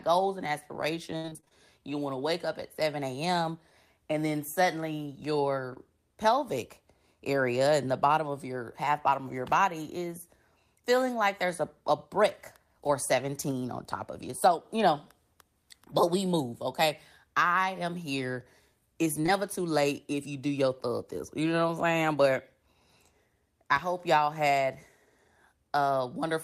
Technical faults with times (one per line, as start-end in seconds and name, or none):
1.17-1.53 repeated packet loss (robotic sound)
5.73-5.78 short concealed packet loss
19.22-19.30 short concealed packet loss